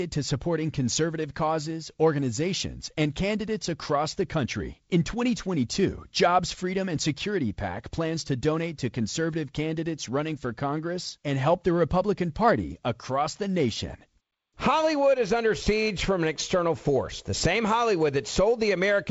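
Nothing goes wrong in this speech recording, which comes across as ordinary G.722 wideband telephone audio at 48 kbit/s, with nothing above about 7.7 kHz and a touch of the light hiss that coding leaves behind.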